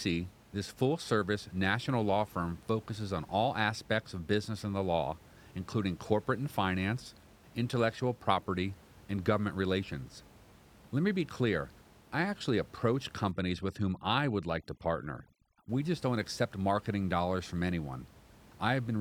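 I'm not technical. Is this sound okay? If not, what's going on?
No. From 13.31 to 15.69 seconds, after "clear I actually approach", there is overdone noise removal. A cleanup tool was set too strong and stripped away quiet parts of the voice along with the room noise. The background drops and breaks up into twinkling specks until "just don't accept marketing".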